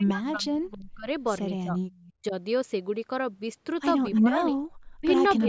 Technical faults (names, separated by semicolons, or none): speech suppressed in double talk; echo leak